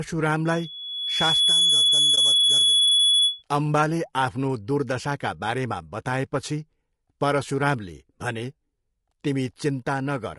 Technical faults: low-delay AAC compression; loudspeaker feedback squeal; AAC frame loss with muting

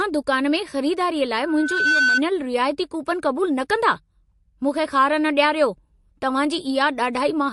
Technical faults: transcoding between lossy codecs; loudspeaker feedback squeal

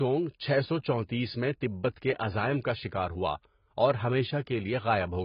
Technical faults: AAC compression

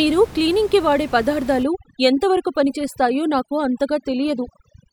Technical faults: overdone noise removal

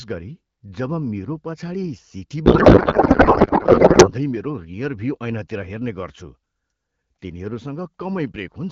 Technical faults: codec payload misread

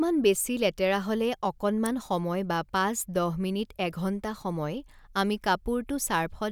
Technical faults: electrical switching spike

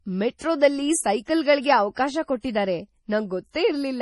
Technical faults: MP3 compression

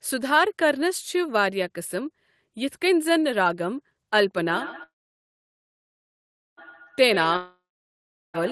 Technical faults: feedback echo between two devices; call audio freeze; long network dropout

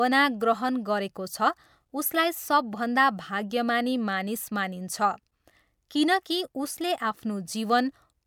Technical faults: none

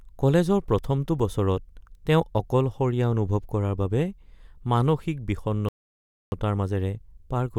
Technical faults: playback stall

